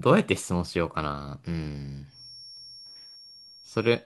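From 2.06 s to the end of the speech, a thin, steady whistle at 5.5 kHz sits behind the sound, roughly 20 dB below it and slowly swelling and fading in level. This is a feedback whistle, likely from the loudspeaker-to-microphone loop hovering right at the edge of feedback, so one high frequency keeps ringing without building up. Unlike a full howl, it never builds into a howl, and its slow swelling and fading separates it from a perfectly constant electrical tone.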